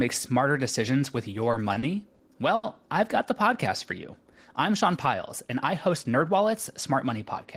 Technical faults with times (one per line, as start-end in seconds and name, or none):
1.51-2.66 repeated stalls (stutter)